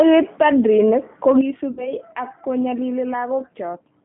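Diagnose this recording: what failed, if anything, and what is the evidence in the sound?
The codec stage is at fault for the whole clip: the speech has the rough, slightly synthetic quality of G.729 coding. This is consistent with an 8 kbit/s stream rebuilt from a vocal-tract filter, a pitch predictor and a few pulses per subframe. The line band runs from 150 Hz to 3.5 kHz. A spectrogram would show nothing above 3.5 kHz and smeared, grainy formant detail within the band.

The network stage adds VoIP packet loss concealed by the speech codec, from 1.71 s to 1.94 s. About 60 ms of audio went missing, which fits three 20 ms packets. The decoder filled the gap by repeating its last pitch and filter state at falling gain, so the sound turns into a stretched tone or coloured noise that fades. Because each frame depends on the one before, the speech stays weak or distorted for tens of milliseconds after the loss. 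On a spectrogram this looks like a static, repeated spectrum, and the waveform envelope tapers off.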